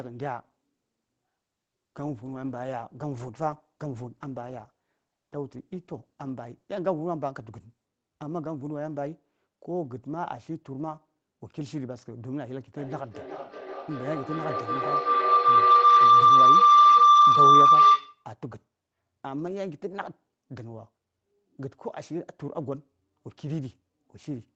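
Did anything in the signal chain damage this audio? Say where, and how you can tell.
Yes. A feedback howl runs from 12.77 s to 18.31 s: a tone around 1 kHz that swells to about 16 dB above the speech, with the loop repeating roughly every 400 ms. An acoustic loop between two devices on the call gained level each trip. Unlike ordinary echo, its repeats grow instead of fading.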